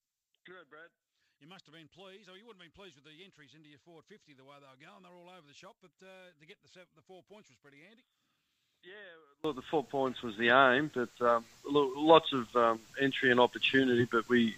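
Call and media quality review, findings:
Polarity fault, one stereo channel inverted, 0.00 to 9.44 s. Likely cause: a wiring or processing stage flipping the sign of one leg before a mono fold-down. On summing, content common to both channels cancels. Level drops about 32 dB, leaving a faint residue of the inter-channel difference; centred material almost gone.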